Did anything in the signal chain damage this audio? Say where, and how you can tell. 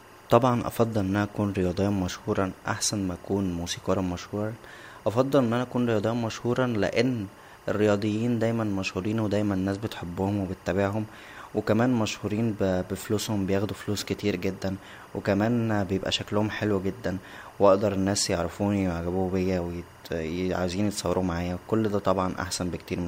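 Yes. A steady chirping warble, well below the speech at about 30 dB down, sits behind the whole clip, flipping between pitches near 1 and 2 kHz. This is timecode bleed in the analogue wiring: a 24-frame linear timecode square wave leaking from an adjacent track or cable.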